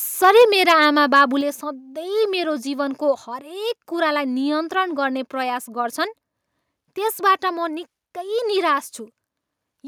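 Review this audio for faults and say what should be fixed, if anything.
Microphone overload from 0.24 to 0.85 s and 1.15 to 1.21 s: peaks about 4 dB and 2 dB over full scale likely hit the converter limit, giving a crackling edge unlike smoother codec distortion.

Microphone volume stepped down at 0.42 s (about 2 dB) and 1.41 s (about 4 dB): speech and background drop together instantly, likely the software cutting input gain, not a gradual fade.

Set the microphone input level lower so peaks have headroom, and the automatic adjustments won't be triggered.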